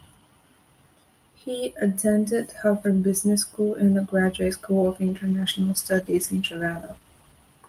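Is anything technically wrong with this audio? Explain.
Yes. From 5.09 s to the end, a call bitrate drop makes the speech coarse and muffled, consistent with the encoder falling from 64 to 14 kbps and losing high frequencies.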